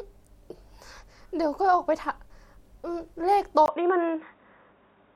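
At 3.66 s the input was likely switched to a poorer device, after a gap of about 20 ms. From then to the end the speech loses everything above 3.8 kHz and turns dull and boxy, the level shifts by roughly 5 dB, and a faint new noise floor appears.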